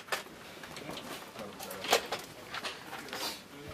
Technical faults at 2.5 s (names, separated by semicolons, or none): damaged data in a compressed stream